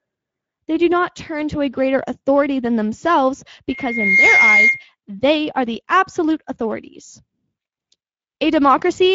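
Throughout, the speech has plainly audible Speex codec damage: a hoarse, noisy texture with nothing above 7.7 kHz, consistent with a wideband mode near 16.8 kbps.

From 3.68 to 4.84 s, between "greater authority than themselves" and "they are the absolute", a loudspeaker feedback squeal appears. A 2.1 kHz tone, where the loop gain exceeds unity, swells over roughly half a second to about 5 dB above the speech.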